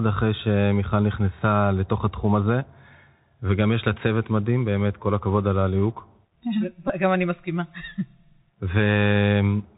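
Throughout, the speech carries the Bluetooth CVSD headset codec's one-bit delta coding, consistent with a 64 kbps link. Nothing passes above 4 kHz, s sounds are scratchy, and a granular hiss sits underneath, unlike ordinary low-bitrate smearing. From 6.88 to 6.90 s, a Bluetooth headset packet is repeated. About 18.8 ms, roughly five packets, was replaced by replayed bits, giving a brief buzz near 267 Hz rather than a gap or click.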